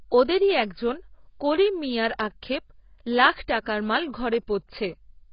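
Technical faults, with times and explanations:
throughout, AAC compression: dull, smeared speech with warbly, fizzy sibilants, likely from low-bitrate AAC-LC; a spectrogram shows nothing above 5.4 kHz and patchy, holed bands.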